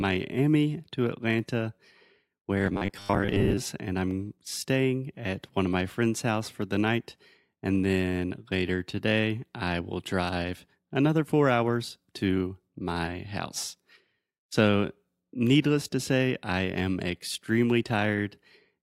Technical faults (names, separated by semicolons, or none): robotic sound from repeated short buffers